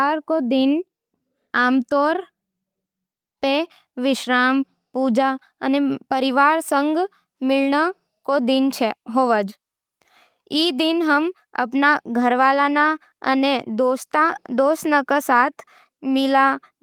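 No technical faults can be heard anywhere in the recording; the speech signal stays continuous and intact throughout.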